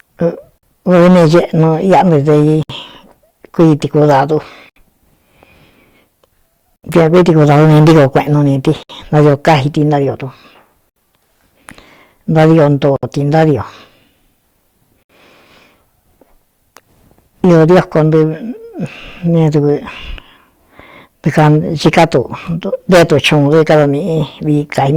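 Hard clipping runs through the whole speech clip: driven about 18 dB past full scale, roughly one sample in twenty is cut flat, giving harsh fuzz on every loud syllable and flat-topped waveform peaks.

Gaps at joins of encoded pieces, where separately encoded segments were spliced with their start delay and end padding left in, open roughly every 2 s at 0.58, 2.63, 4.70, 6.76, 8.83, 10.90, 12.96 and 15.03 s. The first lasts 47 ms and the rest about 67 ms. Each is a brief dropout with smeared edges, seen as a thin vertical blank strip on the spectrogram before the sound resumes where it stopped.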